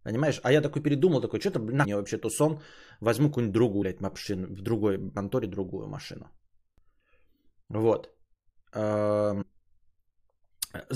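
Compressed frames skipped: whole codec frames of 23.2 ms were lost or rejected by the decoder, so the speech jumps forward with a brief smeared blip rather than a click. This happens at 1.84–1.86 s, dropping roughly 150 ms just before "мне вообще тусон", at 3.81–3.83 s (about 150 ms), at 5.16 s (about 300 ms), and at 9.41–9.43 s (about 100 ms).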